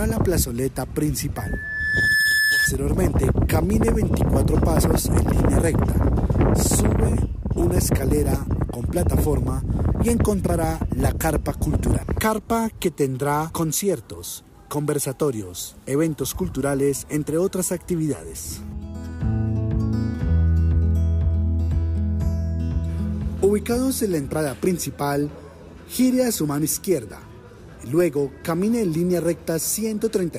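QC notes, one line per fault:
1.36–2.73 s loudspeaker feedback squeal: a 1.7 kHz tone swells over about a second to some 5 dB above the sound, as speaker-to-microphone loop gain exceeds one.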